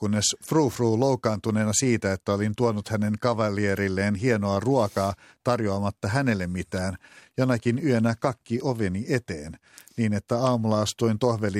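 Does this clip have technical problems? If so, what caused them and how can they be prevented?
No, nothing technical goes wrong anywhere in this recording, so there's nothing to trace back or guard against here.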